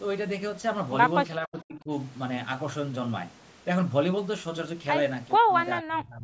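Speech, with three spots where the level suddenly caves in: from 1.41 to 1.9 s, from 5.38 to 5.51 s, and again from 5.81 s to the end. The first drops by about 35 dB, the later two by about 30 dB. That's likely speech suppressed in double talk, where the echo canceller can't separate the near-end voice from the loudspeaker echo and squashes both. The call microphone processing leaves nothing above 8 kHz.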